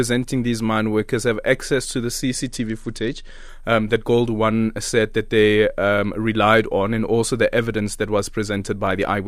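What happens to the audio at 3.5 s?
At 3.5 s the audio is recovering from a Bluetooth SBC bit pool drop that began at 2.44 s, just after "have access to the", and ends at 3.49 s, just before "um that". Over that second the treble is dulled and a gritty noise sits on the speech. The link's allocation fell. The upper sub-bands got few or no bits, and the rest were coarsely quantised. The sound fits a bit pool cut from 28 to 11, near 90 kbps.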